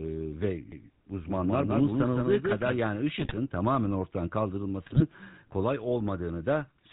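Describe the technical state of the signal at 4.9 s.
At 4.9 s the signal is inside a burst of GSM bit errors running from 4.84 to 5.04 s, just after "tamamen ortadan". Corrupted filter, pitch and gain values produce squawks and gargling, seen as smeared formants and sudden level spikes. Underneath, GSM full-rate codec coding is plainly audible: buzzy, gravelly speech with a hard cutoff at 4 kHz on the spectrogram, which fits 13 kbps full-rate GSM.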